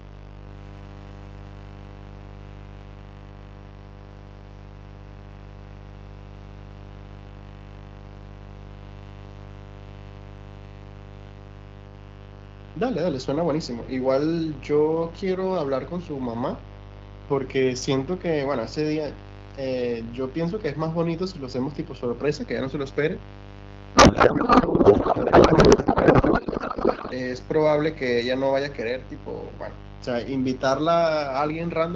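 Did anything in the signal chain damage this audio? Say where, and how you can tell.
Yes, two things. First, there's a mains buzz running through the whole clip, a steady raspy drone sitting fairly high, roughly 15 dB under the speech. The fundamental is 50 Hz, but the rasp comes from the harmonics stacking up into the kilohertz range. That points to the analogue side: something like a dimmer, a rectifier or a missing shield injecting sharp switching spikes twice per mains cycle before the signal was digitised.

Second, from 23.95 to 27.13 s the speech gives way to garbled noise and warble that barely tracks it. That's a codec payload misread at the network/codec stage. The frames decode as valid, but the bit packing is wrong, which fits octet-aligned AMR being read as bandwidth-efficient. The fields land in the wrong places, so the decoder synthesises nonsense. Either side of that stretch the AMR wideband coding sounds clean.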